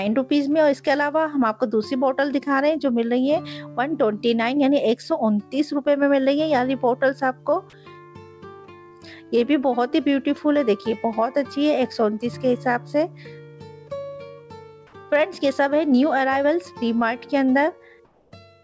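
From 18.05 to 18.32 s, about 270 ms near the end, the quiet background is replaced by comfort noise in place of the background. The sender likely stopped transmitting during the pause, and the receiver filled the gap with steady synthetic hiss about 4 dB quieter than the real background, which sits about 38 dB below the loud passages. Unlike a dropout or noise gate, the gap never falls silent. It becomes smooth, featureless noise, bandlimited like the rest of the call audio to nothing above 8 kHz.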